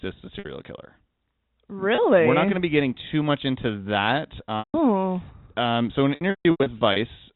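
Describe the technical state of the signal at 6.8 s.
At 6.8 s there is packet loss with pitch repetition, running from 6.15 to 6.96 s after "so an". The receiver repeats the last pitch period, giving a held buzz. Gaps up to 150 ms fade to silence.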